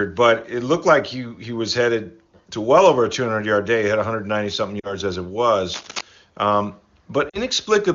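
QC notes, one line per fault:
4.79–4.94 s (just before "as it") and 7.29–7.38 s, lost AMR speech frames: about 40 ms goes missing each time, fitting two dropped frames. The decoder extends the last pitch and spectral shape at falling gain, so the sound drops to near silence and the voice comes back weak or rough for a moment.
5.73–6.01 s (after "as it"), cable scratch noise: likely a loose connector or cable shifting, its contact resistance jumping, which lays dense, uneven rustling bursts roughly 10 dB below the speech.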